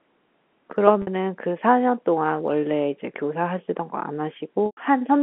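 Telephone-band speech carried over G.711 loses packets twice, at 1.02 to 1.07 s (50 ms) and 4.66 to 4.77 s (110 ms). The receiver repeats the last pitch period, giving a briefly held, buzzy tone that fades over the longer gap.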